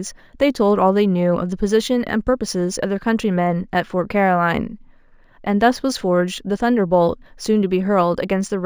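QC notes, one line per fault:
Throughout: imaging from linear upsampling. The audio sounds as if it was raised from a 16 kHz rate to 44.1 kHz by straight-line interpolation between samples, a weak filter that lets a mirrored copy of the speech spectrum through. On a spectrogram the real content softens toward 8 kHz, and a faint reflected band, roughly 30 dB down, fills 8 to 16 kHz. It is heard as a thin metallic shimmer riding on sibilants.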